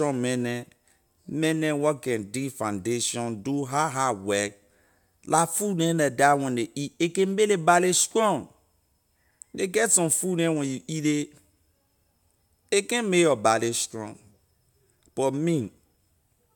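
No technical faults can be heard anywhere in this speech recording. There is no moment in the audio that calls for a timestamp or a closer look.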